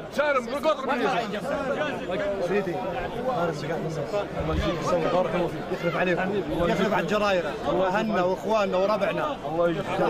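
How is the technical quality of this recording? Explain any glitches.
No glitches turn up anywhere in this recording, so there's nothing here that needs explaining.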